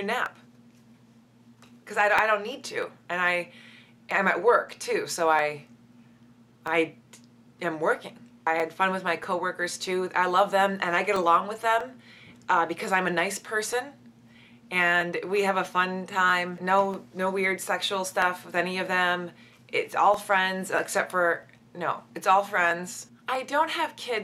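From 0.26 s to 23.99 s, a click recurs at a steady interval of 0.641 s, about forty times in all. These are clock drift buffer slips. Two devices are likely running on separate clocks that disagree by around 500 parts per million. The buffer between them slowly fills or drains. Each time it runs out of room, a block of roughly fifteen samples is dropped or repeated. That jump in the waveform is the regular tick heard against the signal.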